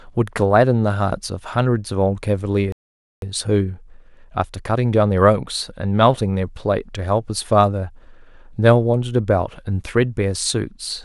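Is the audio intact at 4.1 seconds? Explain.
No. From 3.22 to 6.22 s the speech is under time-compressed catch-up: after a stall, the player trims its backlog by removing short slices and cross-fading the joins, running about 1.1 times fast. Pitch stays normal, but delivery sounds hurried.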